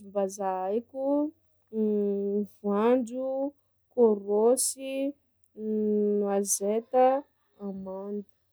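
No technical faults are audible.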